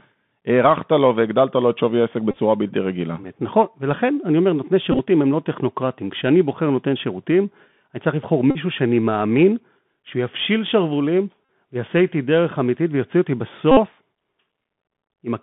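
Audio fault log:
throughout: Bluetooth CVSD headset codec. The link is carrying audio over the narrowband headset codec, which sends a single up-or-down bit per sample at a rate that fits 64 kbps and keeps adjusting its step size. The line passes only about 150 Hz to 3.5 kHz, so the speech sounds thin and boxy. Loud, bright sounds outrun the step and distort, sibilants turn scratchy, and a grainy hiss sits beneath the speech, all plainly audible.
2.31–2.38 s, 4.92–5.00 s, 8.51–8.57 s, 11.45–11.49 s, 13.71–13.78 s: Bluetooth headset packet repeated. Voice packets between headset and phone were lost, and the chip decoded the previous packet's bits again in their place. This replaced about 45 ms, 41 ms, 45 ms, 41 ms and 56 ms of audio. In the first two the losses are spread over roughly 68 ms, with the longest unbroken run about 30 ms at 2.31 s. Back-to-back repeats every 3.75 ms turn into a brief buzz near 267 Hz.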